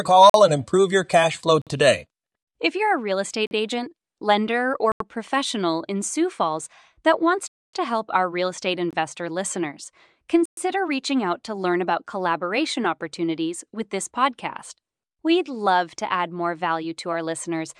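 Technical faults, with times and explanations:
0.30 to 0.34, 1.62 to 1.67, 3.47 to 3.51, 4.92 to 5.00, 7.48 to 7.73, 8.91 to 8.93 and 10.45 to 10.57 s, block of digital silence: the speech drops to silence for 22 to 256 ms, then returns with no fade. The sound cuts out and back abruptly, and the 256 ms one sounds like a hole. It points to output buffers not being filled in time; the 85 ms gap fits a 4096-sample buffer.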